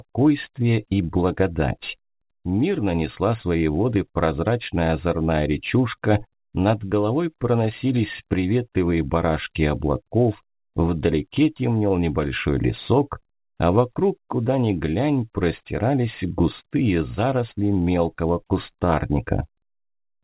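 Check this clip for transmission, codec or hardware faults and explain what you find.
No faults can be heard in this clip.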